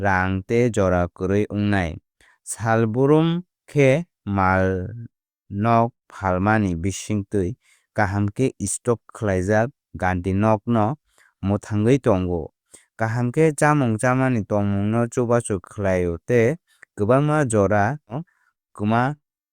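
A speech recording in which, from 18.07 to 18.13 s, the sound lurches abruptly forward with a small blip, so the talk resumes at a point it never smoothly reached. This is the mark of a stream segment skipped, likely where one piece of a segmented stream failed to load and playback carried on with the next.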